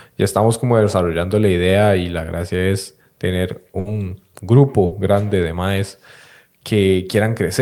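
At 3.79 to 3.87 s and again at 4.85 to 4.93 s, a burst of packet loss drops about 60 ms of speech. The receiver continues the last sound and fades it down, then the waveform resumes further on.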